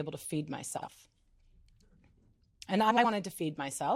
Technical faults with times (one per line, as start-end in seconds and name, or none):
0.77-0.88 frames out of order
2.90-3.05 frames out of order